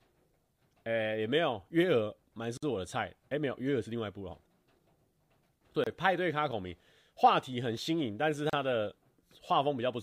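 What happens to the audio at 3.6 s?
Nothing goes wrong at 3.6 s: the speech there plays through intact, with no dropout, click, distortion or other fault.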